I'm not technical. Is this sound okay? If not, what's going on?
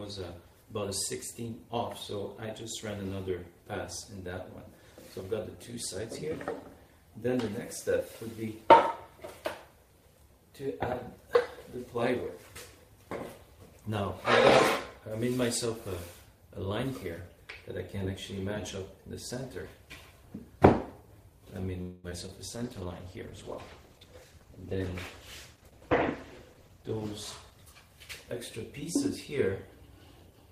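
No. From 21.81 to 22.06 s there's a call audio freeze, likely caused by delivery of the call's data stalling for a moment. The last sound is stretched into a fading buzz or hiss for about a quarter of a second, then the audio picks up where it left off, now slightly later.

Right after that come two short concealed packet losses, at 22.10 to 22.13 s and 22.27 to 22.30 s. Small pieces of audio arrived too late to play, so the receiver patched each hole with a guess based on what came just before, heard as a quick smear or wobble.

From 22.55 to 28.44 s there is a call bitrate drop. The connection seemed to weaken, so the system squeezed the audio into much less data. For those six seconds the sound turns rougher, more watery and more muffled, with the crisp top end missing.

During that stretch there are also two jitter buffer speed-ups. Audio had piled up waiting to play, so the system snipped out tiny slices to catch up. 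From 23.88 to 24.95 s it runs about 11% fast and drops roughly a seventh of a second. From 26.54 to 26.94 s it runs about 7% fast. The pitch stays the same, but those moments sound hurried.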